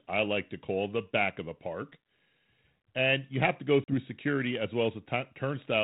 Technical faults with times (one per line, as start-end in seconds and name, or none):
3.84-3.95 packet loss on an ADPCM call